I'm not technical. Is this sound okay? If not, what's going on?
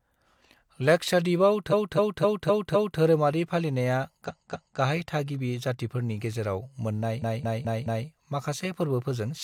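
No. The speech stutters three times. From 1.69 to 2.97 s, just before "धोरोमारि फालिनाया", a quarter-second snippet plays five extra times. From 4.25 to 4.76 s, right after "लाक्षाद्वीपाव धोरोमारि फालिनाया", a quarter-second snippet repeats twice more. From 7.19 to 8.04 s, a 0.21 s snippet repeats four extra times. This is called repeated frames. A chunk of the compressed audio was stored or sent more than once, so the player replays it. Each stutter makes the clip longer by the repeated time.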